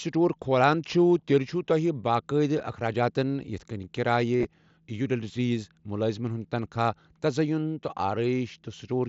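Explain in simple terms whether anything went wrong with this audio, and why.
Between about 4.37 and 4.45 seconds there's a short patch of concealed Bluetooth headset packet loss. Little chunks of audio never made it from the headset to the phone, about 52 ms of it spread over 75 ms, and the phone papered over each gap by repeating a bit of what it had just heard. The longest gap, 30 ms, is where you'll catch a brief buzzy, held tone and a slight wobble as the real sound comes back, all through the wideband mSBC link the headset uses.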